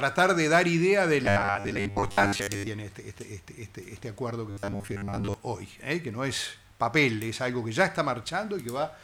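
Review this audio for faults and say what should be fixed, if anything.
Robotic sound from repeated short buffers appears from 1.26 to 2.68 s and again from 4.5 to 5.34 s. Both spans carry a rigid, metallic buzz at 100 Hz, and the sound only loosely keeps its shape. The likely cause is audio arriving too slowly, so the playback fills the gaps by looping roughly 10 ms of the last buffer, and most of the real material in those spans is skipped. Prevent it by giving the stream a larger jitter buffer.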